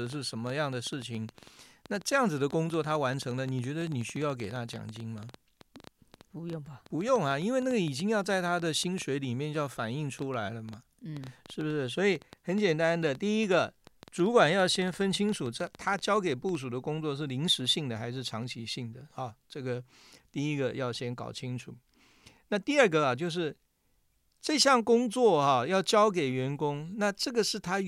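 From 0.07 s to 16.56 s the speech carries a train of clicks, around 150 of them at an average of about 8.2 per second but unevenly spaced. Each pulse has much the same sharp shape and peaks roughly 5 dB above the speech, so the ticking stays audible over the talking and in the pauses between phrases. The likely cause is electrical interference from nearby equipment or a faulty connection or power supply.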